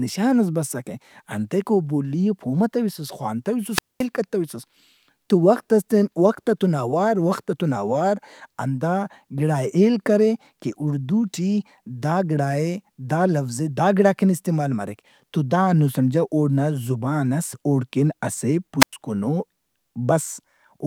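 At 3.68 to 4.07 s and 18.80 to 18.93 s, wireless microphone squelch dropout: the fading radio link first swells into hiss, then the receiver mutes for 218 ms and 100 ms. Unlike a digital dropout, the rising static gives each hole away.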